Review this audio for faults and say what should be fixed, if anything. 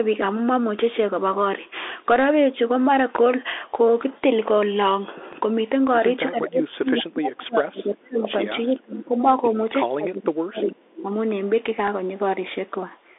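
The link runs through the Bluetooth CVSD headset codec for the whole clip. Its one-bit delta coding, which fits a 64 kbps CVSD link, cuts everything above 3.8 kHz and leaves scratchy sibilants and a granular hiss under the speech. Switching the headset to a wideband profile such as mSBC or LC3 would avoid this.

A DC step occurs at 5.33 s and again at 11.31 s. The waveform's zero line jumps, and a 20 Hz high-pass bleeds the offset away, so each step is heard as a short low thump. A DC-blocking filter ahead of the codec, or holding the converter's offset steady, would prevent it.

Speech is suppressed in double talk from 6.31 to 8.38 s and from 8.67 to 11.09 s. The echo canceller, likely misjudging simultaneous talk as echo, ducks the voice by up to roughly 30 dB across about two seconds in each stretch. A canceller with proper double-talk detection, or better acoustic isolation at the far end, would stop this.

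An echo leak is heard from 8.17 to 8.31 s and briefly at 10.98 to 11.02 s. Loudspeaker pickup likely slipped past the far-end canceller, returning a copy of the voice delayed by 379 ms at about 15 dB below the speech. A headset instead of a speakerphone at the far end, or a better-converged echo canceller, would remove it.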